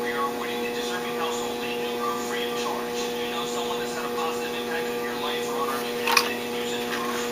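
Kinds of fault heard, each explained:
No technical fault can be heard anywhere in this audio. There is nothing here to list under any heading.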